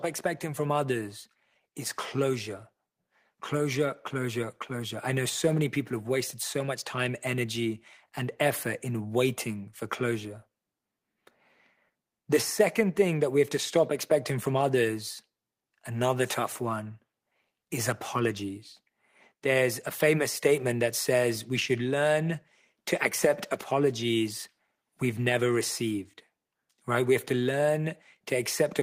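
From 0.22 s to 11.42 s the automatic gain rising fault is audible: the gain control judged the input too quiet and stepped its gain up by about 6 dB over those eleven seconds. Speech and background noise swell together, steadily louder.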